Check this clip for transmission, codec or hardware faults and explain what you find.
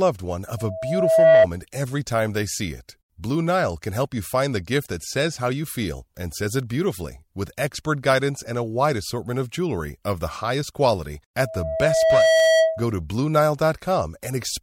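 Loudspeaker feedback squeal occurs twice, from 0.57 to 1.47 s, just before "every time they see", and from 11.39 to 12.88 s, just after "highest quality". The microphone picks up its own loudspeaker, and at 648 Hz the loop gain exceeds one. That tone swells over about 0.7 s in the first event and about 1 s in the second to roughly 10 dB above the speech. On a spectrogram it forms a bright horizontal line at 648 Hz, and on the waveform it shows as a swelling sinusoidal envelope.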